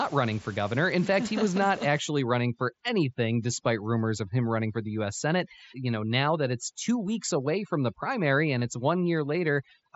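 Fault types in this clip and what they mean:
Overdone noise removal: From about 1.99 s to the end, a noise reduction stage set far too strong pushes individual frequency bands down or off whenever they fall near its noise estimate. The room noise, about 23 dB below the speech, collapses to near silence with twinkling specks, and soft parts of the speech go with it. A spectrogram shows a patchy background of isolated bright dots and holes where faint harmonics belong.
Concealed Bluetooth headset packet loss: At 8.6 s a gap of about 15 ms in the headset link, which fits two lost frames, is filled by repeating the best-matching stretch of the preceding 20 ms or so of waveform. Because it is so short, the patch is nearly hidden. At most it sounds like a tiny buzzy blip with a faint warble as the real audio resumes. The waveform shows a brief, overly regular repeated cycle, and a spectrogram shows momentarily smeared, flattened harmonics.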